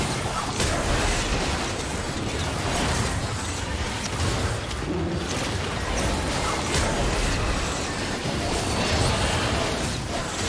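No technical faults can be heard anywhere in this clip. Nothing interrupts or alters the sound at any point.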